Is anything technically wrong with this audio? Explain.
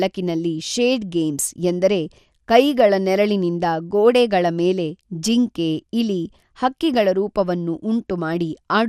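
Yes. Throughout, the speech is dull and gurgly with nothing above 14.3 kHz, likely from MP2 compression switching off upper sub-bands, which fits about 80 kbps.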